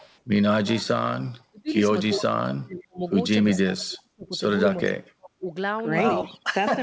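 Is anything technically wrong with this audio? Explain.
Yes, there are two problems. An echo leak appears at 0.0–0.2 s, 2.1–2.23 s, 3.52–3.59 s and 6.24–6.4 s: a faint copy of the speech arrives 345 ms late, likely because the far end's echo canceller let loudspeaker pickup through. It sits about 15 to 30 dB below the main speech.

Speech suppressed in double talk occurs at 1.44–1.71 s, 2.12–3.04 s and 3.45–5.45 s. The speech drops by roughly 35 to 40 dB, likely because the echo canceller ducked it during overlapping talk. The longest stretch spans about 2 s, with about a second and a half of it affected.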